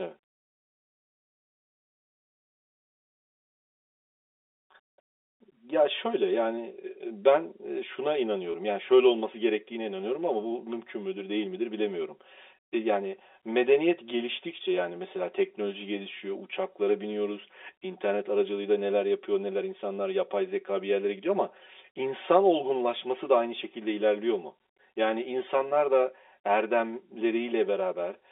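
Channel delay (comb filtering) runs through the whole speech clip. One channel trails the other by roughly 5 ms, and summing them to mono cancels their shared content at evenly spaced frequencies, the first notch near 100 Hz. Across the telephone band this leaves a hollow, phasey colour.

Packet loss with pitch repetition occurs from 8.52 to 8.54 s. About 20 ms of audio went missing, which fits a single lost packet. The receiver bridged the gap by repeating the last pitch period, heard as a brief held, buzzy moment.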